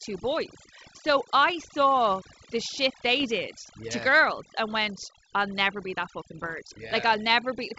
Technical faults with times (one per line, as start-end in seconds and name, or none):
0.00-7.79 overdone noise removal
3.20-3.25 bit errors on an ADPCM link
6.35-6.54 bit errors on an ADPCM link